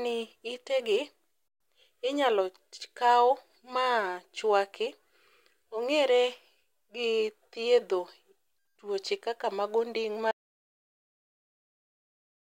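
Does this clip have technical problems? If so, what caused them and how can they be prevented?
Yes. An audio dropout to silence runs from 10.31 s to the end, about 2.1 s. The speech cuts off mid-flow into total silence with no room tone, which shows as a flat-line waveform and a blank spectrogram. The input was likely lost while recording continued. Securing connections and watching input meters while recording prevents this.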